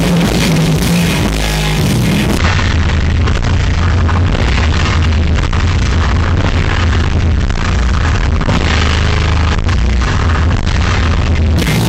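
From 2.38 s to 11.58 s a section at the wrong speed runs at half its proper rate, so everything in it lasts twice as long and drops in pitch by about ten semitones. Timing and pitch move together, giving the sound a slow, deep, dragged character that snaps in at 2.38 s and ends at 11.58 s. The likely cause is the passage being played against the wrong clock during editing or playback.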